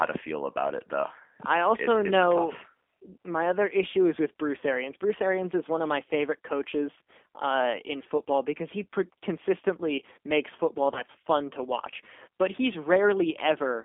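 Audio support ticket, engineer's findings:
G.729 codec throughout: band limited to roughly 200 Hz to 3.5 kHz, plainly rough, slightly synthetic texture on all speech. Probable component: narrowband CELP voice codec, sound consistent with 8 kbit/s G.729A. Vocal tract filter plus sparse pulse excitation rebuilds each 10 ms frame, so fine detail is lost. Unlike simple band-limiting or low-bitrate MP3, the damage is a buzzy, modelled quality rather than muffling or swirling high-frequency artefacts.

VoIP packet loss concealed by the speech codec, 10.94 to 11.02 s, between "consistently makes football" and "fun to watch": brief smeared stretch with weakened level. Missing audio of about 20 ms fits a single lost packet. Decoder extrapolated last pitch and filter with falling gain. The effect persists beyond the 20 ms gap as the predictor recovers. Unlike a hard dropout, there is no silence or click.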